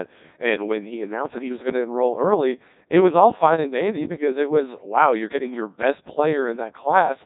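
A speech recording that has been through the Codec 2 vocoder for its whole length, and heavily so. The voice comes out robotic and buzzy because the decoder never keeps the original waveform. It rebuilds the sound from sine waves driven only by pitch, voicing, energy and a coarse spectral envelope. The degree of smearing points to one of the lowest modes, around 1.2 kbit/s. Nothing survives above 3.9 kHz.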